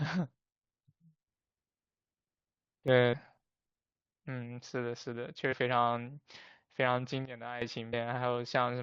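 At 2.88 s the digital gain likely steps up without a ramp, so the speech and its background noise jump together by about 6 dB and stay raised until 3.67 s, where they drop back just as abruptly. Inside that louder stretch, at 3.12 s, a short run of damaged data in the compressed stream makes the decoder misread a frame and lose sync. It comes out as a brief blip.

The same kind of corrupted data strikes again from 5.51 to 5.53 s. The decoder hunts for the next valid frame header, leaving another short blip in the speech.

From 7.25 to 7.62 s a second abrupt gain change likely occurs, this time downward by about 12 dB. The voice and noise floor sink sharply together and then snap back up.

Finally, at 7.92 s, one more damaged patch of compressed data produces a last quick blip as the decoder resynchronises.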